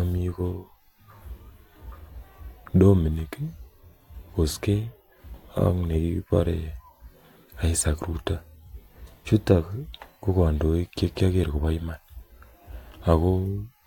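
Speech recording with no audible technical faults.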